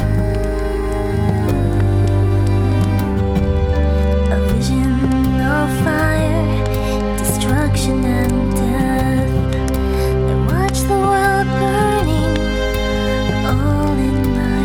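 Nothing stood out on listening to this audio.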